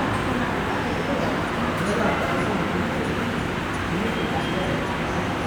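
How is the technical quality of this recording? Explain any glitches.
No glitches turn up anywhere in this recording of sound. Nothing interrupts or disturbs the audio at any point.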